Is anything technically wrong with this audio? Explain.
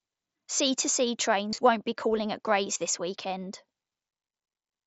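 Yes. Around 1.51 to 1.58 s the speech briefly turns buzzy and held, with a slight warble as normal sound resumes, and shorter, nearly hidden glitches occur at 2.74 s and 4.32 s. This is concealed Bluetooth headset packet loss. Voice packets from the headset went missing, and the receiver filled each gap by repeating the closest-matching recent stretch of waveform. The first event loses about 52 ms scattered over 75 ms, with the longest run about 22 ms. The mSBC headset codec limits the band to 8 kHz.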